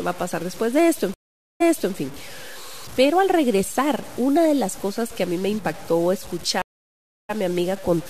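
Across the whole speech clip a gritty, signal-following distortion sits roughly 20 dB below the voice, likely low bit depth without dither, consistent with truncation to about 6 bits. On a waveform, quiet passages look stepped. A spectrogram shows broadband grain tracking the speech.

Stream reconnects occur at 1.14–1.95 s and 6.62–7.31 s. Each is a silent gap, a flat line on the waveform and a blank spectrogram column, of 0.46 s and then 0.67 s. Audio resumes 0.35 s earlier, repeating material, and then roughly 0.1 s later, skipping some.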